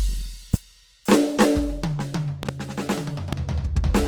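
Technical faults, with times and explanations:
Throughout: Opus compression. The music sounds grainy and rough, with tones turned noisy and plainly audible codec damage, yet the full bandwidth stays open to about 20 kHz. This likely comes from Opus in its music mode at a low rate, near 24 kbps, filling starved bands with folded or noise content.
0.54 s to 0.56 s, 2.43 s to 2.51 s, 3.33 s to 3.35 s: loud pop. Sharp pops stand out from the music, about 15 dB above it, a single one at the first and last times and two in quick succession in the middle, while the music carries on underneath. The likely cause is a sudden voltage step or pulse added to the signal, from a plug, switch, static or driver glitch.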